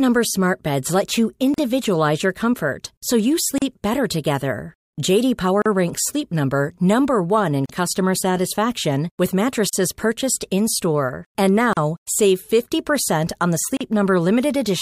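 Gaps at joins of encoded pieces cut the speech every 2.0 s: at 1.54 s after "let you", 3.58 s before "better together", 5.62 s, 7.66 s before "customer satisfaction with", 9.69 s, 11.73 s and 13.77 s. Each is a silence of about 38 ms with smeared edges. The untrimmed encoder start delay and last-frame padding from each piece remain at every join.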